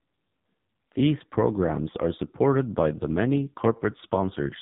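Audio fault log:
Throughout: AMR narrowband mobile codec, heavily compressed at a low rate that fits 5.15 kbps, giving buzzy, synthetic speech; the spectrogram shows nothing above 3.8 kHz, a flat ceiling.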